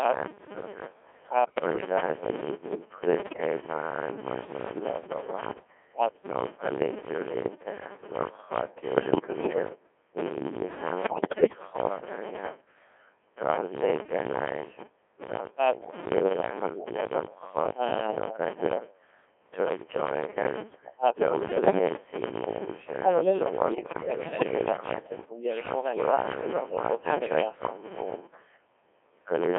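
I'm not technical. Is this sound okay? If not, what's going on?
No. Three separate problems are affecting this speech.

First, a block size mismatch (padded): one stage hands over shorter chunks of audio than the next expects, and the gaps are filled with silence. The result is a steady buzz at about 94 times per second, and the speech runs at roughly five-eighths of its normal speed while its tone colour stays about the same. This fits a stage reading 512-sample blocks.

Second, the voice has been squeezed through the Codec 2 vocoder, a digital-radio system that sends only a rough description of the voice and rebuilds it from simple tones. The original sound is not kept, so the speech sounds robotic, buzzy and heavily damaged, with a narrow, telephone-like range.

Third, there are bit errors on digital voice radio: corrupted data reached the vocoder, scrambling its description of the voice. 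The speech suddenly jumps in pitch and loudness and breaks into bleeps and robotic gibberish at 1.44–1.86 s, 3.20–3.41 s, 8.96–9.62 s, 11.04–11.58 s, 21.40–21.79 s and 23.72–24.58 s.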